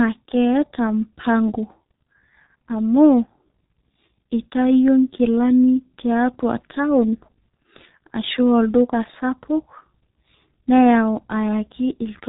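Throughout the speech, G.723.1 codec damage is heavy. The coarse, slowly updated voice model, consistent with a bitrate near 6.3 kbit/s, leaves speech muffled and hoarse with smeared consonants. A spectrogram shows a hard ceiling at 3.9 kHz and blurred, blocky formant detail.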